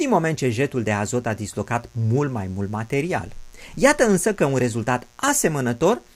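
Mains buzz runs through the whole speech clip, sitting roughly 35 dB below the speech. Sharp switching spikes leaking in twice per 60 Hz cycle stack up harmonics reaching several kilohertz, giving a steady, raspy buzz beneath everything.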